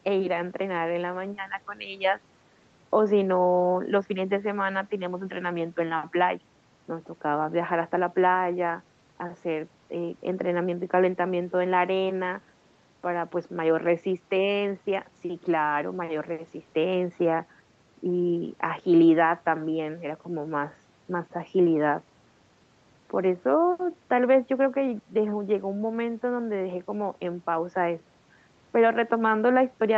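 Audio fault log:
Nothing stood out on listening to this speech, which carries the band-limited sound of a call path that stops at about 8 kHz.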